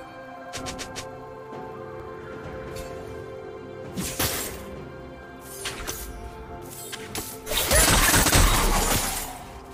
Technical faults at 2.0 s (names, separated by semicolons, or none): audio missing between chunks